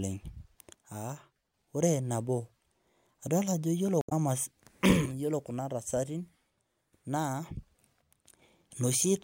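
From 0.75 to 1.54 s, 5.06 to 7.46 s and 8.02 to 8.42 s, one channel likely drops out, so the mono-summed speech falls abruptly by about 6 dB, then recovers. From 3.99 to 4.12 s, damaged data in the compressed stream makes the decoder lose sync and hunt for the next frame, heard as a brief glitch.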